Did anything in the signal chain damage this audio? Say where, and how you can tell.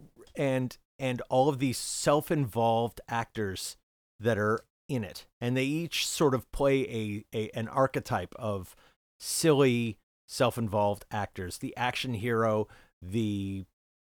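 No, nothing in the signal chain damaged this speech recording. No stage, from capture through to playback, has left an audible mark on the signal.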